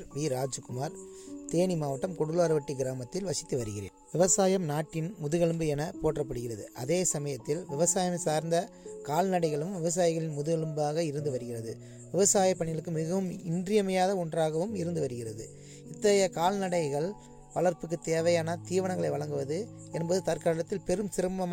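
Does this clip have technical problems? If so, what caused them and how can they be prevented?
No, no technical faults are audible.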